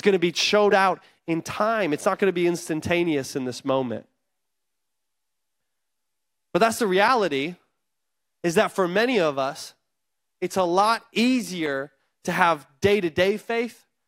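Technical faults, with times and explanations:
No technical faults can be heard in the speech. At no point does anything in the recording stand out as a problem.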